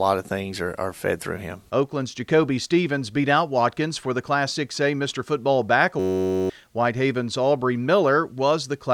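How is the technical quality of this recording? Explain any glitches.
One glitch stands out. From 6.00 to 6.50 s, a system hang loop repeats a single 10.67 ms buffer (fitting 512 samples), producing a steady 93.8 Hz buzz. The identical repetition, not silence, sets it apart from a dropout. About half a second of audio is lost.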